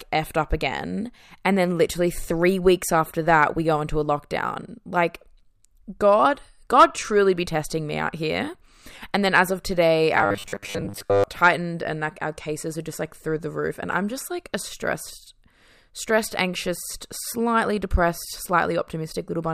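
New audio apparently stopped reaching the playback software often enough between 10.18 and 11.24 s, and it likely filled the gaps by looping the last short buffer while the real audio was dropped, giving robotic sound from repeated short buffers. In this speech clip, the repeats cover most of that second and impose a fixed 100 Hz buzz, which fits a loop about 10 ms long. The voice becomes a rigid, metallic drone that still loosely follows the words.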